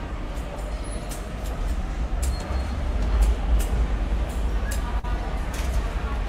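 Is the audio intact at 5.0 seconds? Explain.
No. A short concealed packet loss runs from 4.99 to 5.05 s: about 40 ms of audio never arrived, so the receiver extended the preceding sound and crossfaded back. It's heard as a brief smear, and a spectrogram shows a blurred, repeated-looking patch.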